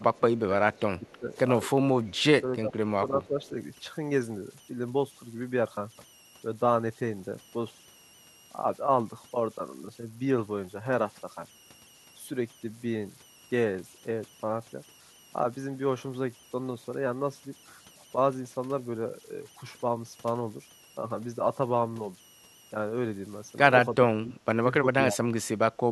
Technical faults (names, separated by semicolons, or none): converter idle tones; speech suppressed in double talk; echo leak